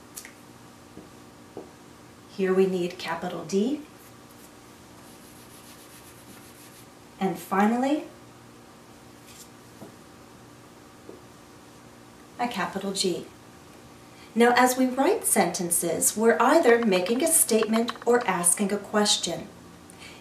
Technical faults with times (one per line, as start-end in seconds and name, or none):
none